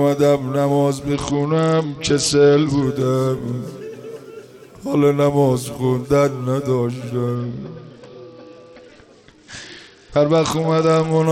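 Twice the audio turns dull and gritty, from 1.14 to 2.85 s and again from 7.35 to 11.25 s, with the treble dulled and a coarse noise layered over what remains. This is a Bluetooth SBC bit pool drop. The link starved the encoder of bits, leaving the top sub-bands with few or no bits and the rest crudely quantised. The sound fits a bit pool cut from 31 to 9, roughly 72 kbps.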